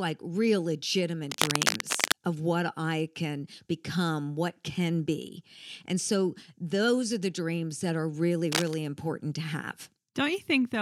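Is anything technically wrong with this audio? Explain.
Yes. Cable scratch noise appears from 1.30 to 2.25 s and from 8.52 to 8.74 s. Dense, ragged scratching sits over the speech, roughly as loud as it. The likely cause is a worn connector whose contact flickers as it moves.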